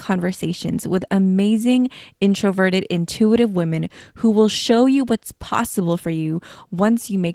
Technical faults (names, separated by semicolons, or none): Opus voice compression